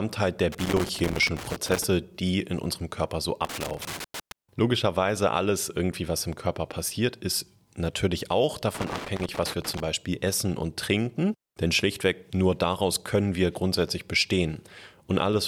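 A worn or dirty contact somewhere in the signal path is making and breaking as it shifts, producing loose connector crackle in this speech recording. Each time the connection flickers the signal is chopped on and off, and any DC sitting on the line turns those breaks into pops. The result is an irregular burst of scratchy crackle, heard from 0.52 to 1.84 s, again from 3.45 to 4.32 s, and from 8.75 to 9.80 s.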